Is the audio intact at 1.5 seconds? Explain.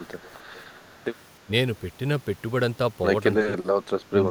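No. Around 1.46 to 1.51 s there is speech suppressed in double talk: the echo canceller likely failed to separate the talker from loudspeaker echo while both sides spoke, and attenuated everything, so the speech briefly dips, by around 10 dB at its deepest.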